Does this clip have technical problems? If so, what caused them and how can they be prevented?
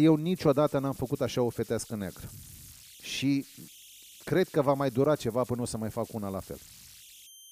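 Yes. Converter idle tones run throughout: a whistle around 3 kHz, about 24 dB below the speech, heard in pauses and as graininess under quiet passages. An undithered delta-sigma converter cycles through repeating bit patterns at low input, and those patterns form tones. A spectrogram shows a thin horizontal line near 3 kHz. Adding dither to the converter breaks up these patterns.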